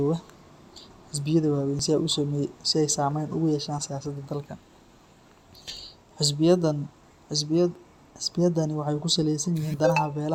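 Overlap between stream segments at 1.79, 5.77 and 7.75 s: speech from overlapping 2-second segments is trimmed, removing a few milliseconds, so the waveform jumps, heard as a tiny skip.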